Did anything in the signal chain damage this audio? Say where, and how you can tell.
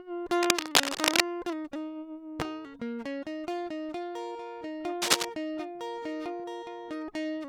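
Yes. The damage sits in the analogue wiring, most likely a worn cable, connector or control whose contact resistance jumped around as it was moved. Cable scratch noise appears from 0.39 to 1.21 s and again from 5.02 to 5.25 s: dense, irregular bursts of crackle and rustle, roughly 10 dB louder than the music. Each burst lasts only while the contact is disturbed, so the scratching rides over the music and then stops.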